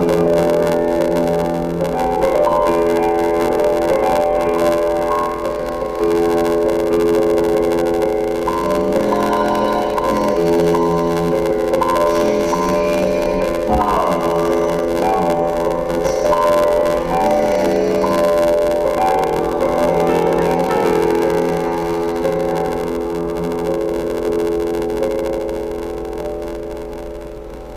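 A block size mismatch (padded) runs through the whole clip: each block arrives short and the remainder is filled with silence, so a gap recurs in every block, fitting a 512-sample read buffer. This produces a buzz near 86.1 Hz, and the sound plays at 0.861 times normal speed while keeping its timbre.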